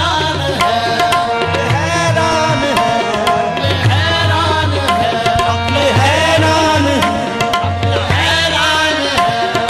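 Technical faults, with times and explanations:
8.31–8.33 s, overlap between stream segments: two neighbouring stretches of the stream claimed the same span of time, and the player discarded about 20 ms of sound that was never actually duplicated. The waveform jumps straight from the sound just before 8.31 s to the sound just after 8.33 s, giving a single brief click or skip. Nothing fills the gap with silence or a smeared repeat, which separates this from a dropout or concealed packet loss.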